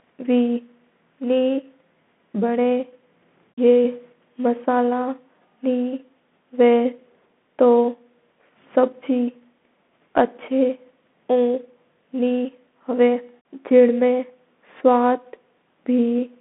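The speech passes through a Bluetooth CVSD headset codec for the whole clip. It codes each sample as a single up or down step whose size adapts, at a rate consistent with a 64 kbps link. The line is narrowband, with a passband of roughly 200 Hz to 3.5 kHz and nothing above 3.8 kHz. The speech sounds boxed-in and dull. Loud, bright passages outrun the step size and distort, s sounds turn scratchy, and a granular hiss sits underneath.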